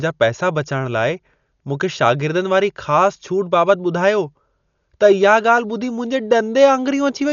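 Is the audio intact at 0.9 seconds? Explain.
No. At 0.9 s, as throughout, the speech sounds dull and cut off above 6.9 kHz, with rough fluttering noise, likely from heavy Dolby Digital compression at roughly 48 kbps.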